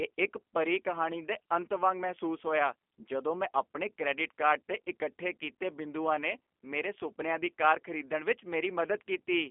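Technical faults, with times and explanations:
Throughout, G.729 codec: the speech has the rough, slightly synthetic texture of G.729A, which fits an 8 kbit/s stream. The codec does not carry the waveform itself. It sends a vocal tract filter, a pitch predictor and a few pulses for each short frame, and the decoder rebuilds speech from those parameters. That reconstruction causes the plainly audible graininess. The line band runs from about 250 Hz to 3.4 kHz, with nothing above 3.4 kHz, so the sound is thin and narrowband.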